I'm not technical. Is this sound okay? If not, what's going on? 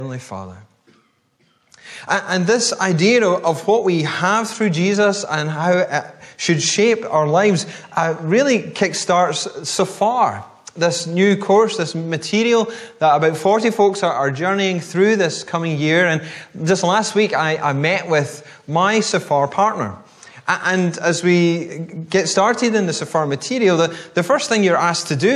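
No. Gain pumping runs throughout: loud and soft parts end up closer in level and the sound is squashed, likely from a limiter fighting overly high gain, not a noise gate cutting silence.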